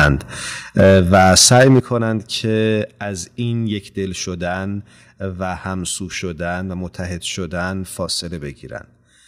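Microphone overload at 0.00 to 0.08 s and again from 0.79 to 1.79 s puts a harsh, crackling edge on the loudest speech peaks. The likely cause is an input level set too high, driving the signal about 6 dB past the converter's ceiling, so the tops of the waveform are sheared flat. Around a tenth of the samples in these stretches are clipped.

Microphone volume stepped down at 0.80 s by about 4 dB, at 1.80 s by about 9 dB, and at 2.82 s by about 4 dB. Speech and background drop together in abrupt steps, each likely the call software reacting to a too-loud or clipping input by cutting the device's input volume in a single move. The first step lands almost immediately after the overload begins, and the deepest one follows just as it ends.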